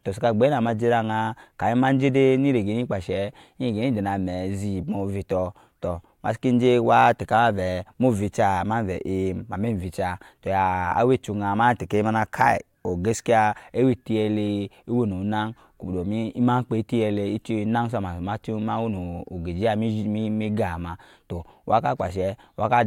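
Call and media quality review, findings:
Nothing stood out on listening to the speech; no findings to log against call or media quality.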